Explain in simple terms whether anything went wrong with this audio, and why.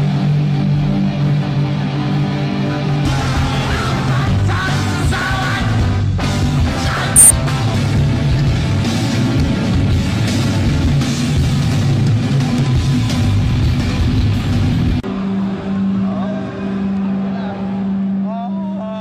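Yes, something goes wrong once. Between about 7.16 and 7.22 seconds the sound suddenly jumps forward with a brief blip, as if a piece of it has gone missing. That's most likely a stream segment skipped: the audio was streamed in small chunks, one chunk didn't arrive in time, and the player gave up on it and moved straight to the next. So the blip is the seam where the missing part was cut out.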